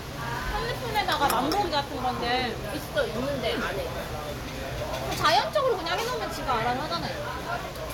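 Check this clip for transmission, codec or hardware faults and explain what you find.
Hard clipping appears twice, from 0.97 to 1.79 s and from 5.25 to 5.39 s. The level there overshoots what the converter or number format can hold by about 7 dB, so peaks are cut flat, adding a harsh, buzzy fuzz. Unlike codec distortion, it follows loudness alone and stops when the signal falls.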